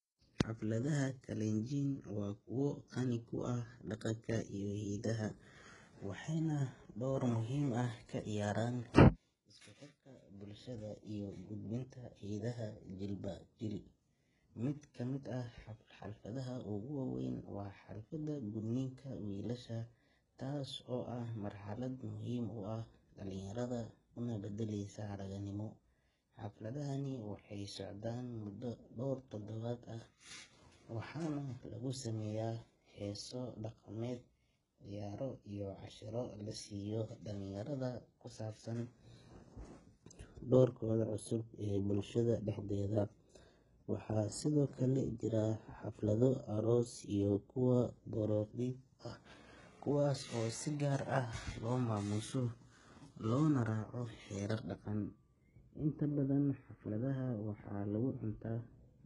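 Throughout, likely HE-AAC compression at a bitrate near 12 kbps rebuilds the treble from copied lower bands, so s sounds turn heavily gritty and lispy.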